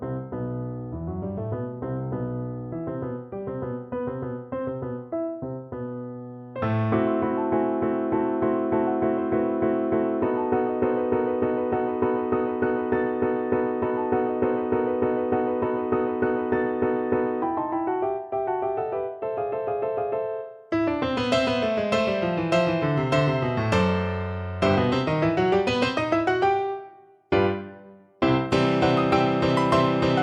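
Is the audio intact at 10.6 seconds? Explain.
Yes, at 10.6 seconds the audio plays through intact, with no dropout, click, distortion or other fault at that moment.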